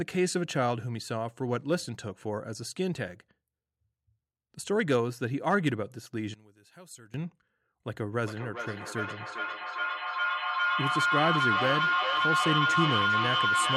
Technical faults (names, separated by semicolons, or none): one channel inverted; feedback echo between two devices